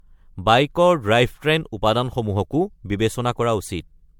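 From start to finish the speech sounds swirly, smeared and hollow, with blurred attacks and nothing above 19.9 kHz. That points to generation loss, likely from repeated MP3 encoding around 96 kbit/s, perhaps five passes. Unlike one low-bitrate encode, the damage exceeds what that bitrate explains.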